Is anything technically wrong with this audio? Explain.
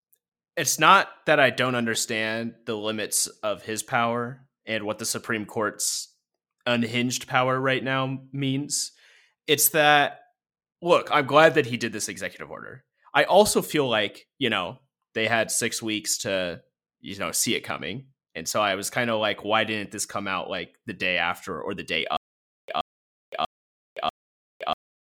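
Yes. A stutter with silent gaps starts at 22.17 s, right after "after or the day", and runs to the end of the clip. A short 125 ms burst of speech plays, then about 516 ms of dead digital silence follows, and the same burst returns four times at an even 641 ms period. This is likely a stalled player or stream that replays its last buffered fragment on each retry and then runs empty, so the speech that belonged in those gaps is lost.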